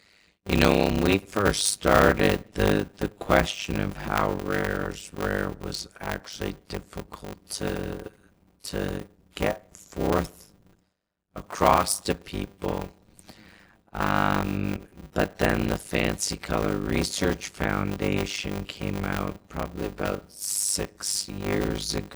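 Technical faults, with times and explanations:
Throughout, block size mismatch (padded): one stage writes short blocks, which fits 256 samples, into a next stage that reads larger ones, apparently 480 samples, and the rest of each block is filled with silence. A gap is inserted in every block, so a steady 100 Hz buzz runs under the speech, and the speech runs at about 0.53 times normal speed, nearly half, while its timbre stays.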